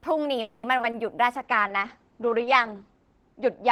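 Speech with three kinds of fault. A call audio freeze runs from 0.41 to 0.65 s: the sound is stretched into a fading buzz for about 220 ms and then resumes exactly where it stopped, with nothing lost. The likely cause is delayed packets draining the jitter buffer, which leaves the rest of the speech 220 ms later. Short concealed packet loss follows at 0.77–0.81 s, 0.81–0.85 s and 0.91–0.95 s. Each time about 20 ms of audio never reached the decoder and was replaced by an extrapolation of the preceding sound, heard as small smears or wobbles. From 1.35 s to the end there is a call bitrate drop. The encoder's rate falls from 40 to 9 kbps and its audio bandwidth narrows from 20 kHz to 8 kHz, staying at the lowest setting for 1.34 s, so the speech turns coarse and muffled.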